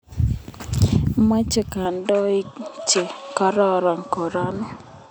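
At 1.85 s the speech abruptly loses its top end and stays that way to the end. Nothing above 8.2 kHz gets through after that point. The sound turns duller and boxy. There is no gap at the change and no clear jump in loudness. A faint new background noise appears, roughly 50 dB below the speech. The likely cause is an input switched to a poorer device, with a narrower band and its own noise.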